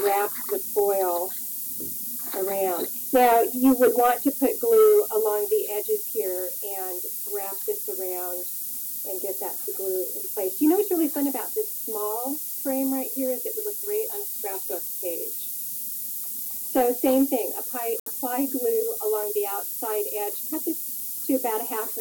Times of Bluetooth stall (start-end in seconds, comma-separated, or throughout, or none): 18.00-18.08